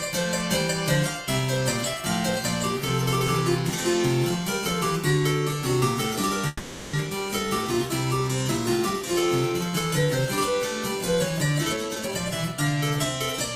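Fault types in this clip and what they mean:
call audio freeze: From 6.47 to 6.95 s the last sound is stretched and fades. Delayed packets likely emptied the jitter buffer. It adds 460 ms; nothing is missing.
jitter buffer speed-up: From 11.73 to 12.12 s the sound hurries at 174% speed, same pitch. About 0.3 s of pitch-period pieces is cut to drain the buffer.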